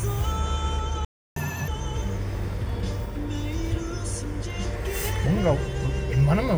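At 1.05 s the audio cuts out in mid-flow and stays silent until 1.36 s, a gap of about 315 ms. This is a playback stall: the output simply stops rather than fading, and the sound then resumes. The likely cause is the player running short of buffered data, or its audio thread being blocked long enough that nothing reached the output until it recovered.

From 1.36 s to 1.68 s the resumed audio runs at double speed, a catch-up at higher speed. Having fallen behind during the gap, the player resamples its backlog to recover the lost time, so tempo and pitch rise together, the pitch by around ten semitones, giving a brief chipmunk-like quality. At 1.68 s the delay has been made up and speed and pitch drop back to normal.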